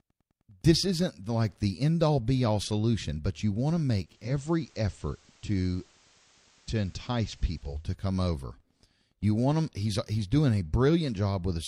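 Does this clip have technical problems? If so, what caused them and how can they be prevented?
Yes. A nearby Wi-Fi radio's beacons are rectified by the audio circuit, causing Wi-Fi interference: very faint ticking every 102.4 ms, about ten per second, throughout. Keeping Wi-Fi equipment away from the audio wiring and using shielded cables prevents this.

Losing the digital signal caused digital radio blending to analogue: from 3.97 to 7.91 s the receiver cross-fades over about 0.4 s to FM, adding hiss roughly 35 dB down. A better antenna or stronger digital reception prevents the fall-back.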